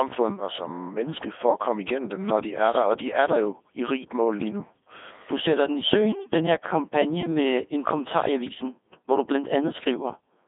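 Speech passed through a Codec 2 vocoder for its full length. It sounds robotic and buzzy. The decoder rebuilds it from sine waves using only pitch, voicing, energy and envelope, so the original waveform is gone. Damage is heavy, consistent with roughly 2.4 kbit/s. Nothing survives above 3.7 kHz.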